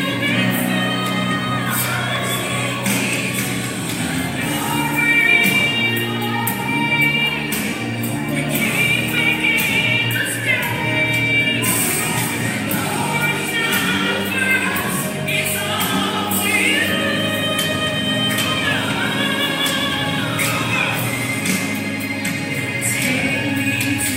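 At 2.16 s and again at 9.18 s, a block of digital silence drops the signal straight out: about 0.3 ms, then 2.9 ms, the second fitting a 128-sample buffer left unfilled. Each heard as a tick; waveform shows flat silent segments with sheer edges, spectrogram thin broadband vertical lines.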